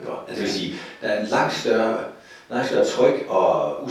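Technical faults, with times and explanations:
No technical faults detected.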